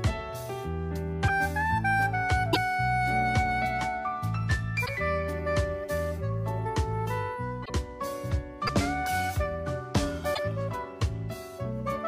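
Brief glitches, each 30 to 60 ms long, interrupt the audio at 1.27–1.30 s, 2.52–2.57 s, 4.85–4.89 s, 7.64–7.70 s, 8.66–8.69 s and 10.33–10.39 s. Each one spans roughly one to two 26.1 ms frames, and the sound skips forward across it. The likely cause is a broken MP3 bit reservoir. Frames were lost, and the frames that followed pulled their borrowed data from the wrong bytes, so they decoded as garbage. On a waveform each spot shows an abrupt discontinuity. On a spectrogram it shows as a narrow vertical band that breaks the surrounding pattern.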